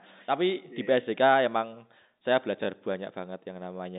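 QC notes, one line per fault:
Nothing stood out on listening to this speech, which comes through the narrow band of a telephone line.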